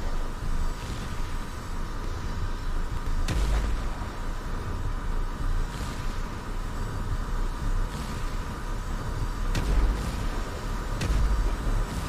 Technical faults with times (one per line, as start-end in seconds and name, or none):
1.86-2.04 chunks out of order
2.88-3.06 chunks out of order